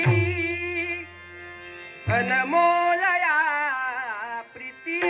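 No faults are present; the audio carries the band limit and coding texture of a narrowband call path, with nothing above 4 kHz, consistent with a G.711 A-law link at 64 kbps.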